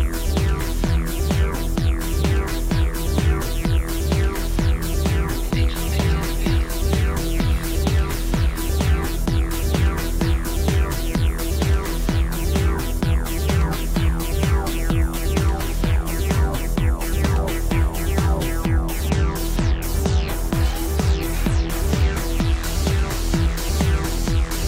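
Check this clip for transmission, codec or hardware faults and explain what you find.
No faults are audible.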